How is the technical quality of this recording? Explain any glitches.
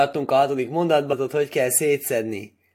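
There is one glitch. At 1.12 s the speech breaks up briefly. This is damaged data in a compressed stream. Corrupted bytes made the decoder misread a frame, lose sync and hunt for the next frame header. The result is a short disruption in the speech.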